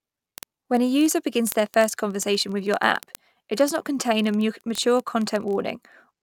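Word clock ticks run through the whole speech clip, from 0.11 s to 6.21 s: some three hundred sharp clicks of uneven strength, one roughly every 20 ms. The receiving device is running on its own clock, not locked to the sender's digital link. The two clocks differ by around a thousandth, so they slip past each other continually, and at each slip one sample is dropped or repeated, producing this steady, rapid ticking.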